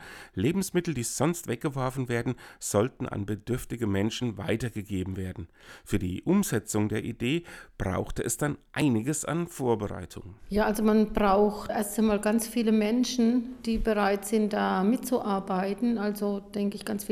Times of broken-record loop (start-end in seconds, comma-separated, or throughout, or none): none